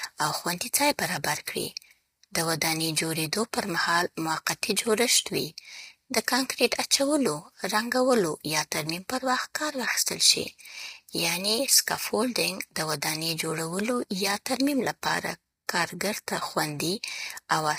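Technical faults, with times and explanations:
Throughout: low-delay AAC compression. The speech is rough and grainy, with noise filling the gaps between pitch harmonics and a thin, synthetic-sounding top band. The damage is heavy, the kind a low-delay AAC-ELD codec at around 24 kbps is likely to produce. Its short frames of roughly 10 ms cannot resolve individual harmonics well and spend more bits per second, so at this rate too few bits remain to code the spectrum cleanly.
15.67 s: pre-echo. A hiss of about 16 ms comes just before the attack of "کارګر ته", and that onset sounds softened. A transform codec spreads its quantisation noise evenly across a coding block. When a sharp attack falls late in a block, noise sized for the loud attack also fills the quieter moment before it.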